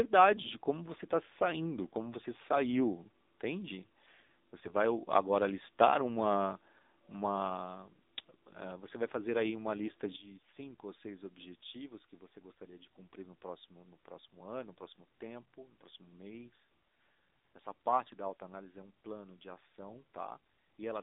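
The whole recording has passed through the AMR narrowband mobile codec. The speech is confined to roughly 200 Hz to 3.7 kHz, with nothing above 4 kHz, so it sounds thin and telephone-like. The coding damage is plainly audible: voiced sounds have a buzzy, synthetic edge, which fits a low AMR-NB mode around 7.4 kbps. At that rate the vocal-tract model and sparse pulse excitation cannot capture the finer detail of the voice.

From 4.61 to 4.74 s there is a burst of AMR bit errors lasting about 0.13 s, which fits a handful of corrupted 20 ms frames. Flipped bits in the weakly protected parts of those frames misplace the excitation pulses and skew the finer pitch, gain and spectral values. Pitch and level stay roughly in place, but the voice briefly turns hoarse and gargly, consistent with an error rate of a few percent.

At 10.16 s the level of the speech and the background drops together by about 12 dB and stays down to the end at 21 s. 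It is a sudden gain jump with no fade, most likely a digital gain change applied from one sample to the next without a ramp.

A second, longer burst of AMR bit errors runs from 12.50 to 12.73 s, about 0.23 s. It causes the same scratchy, gargling distortion over roughly twice as many frames as the first burst. Because it falls inside the attenuated section, it is heard at the reduced level.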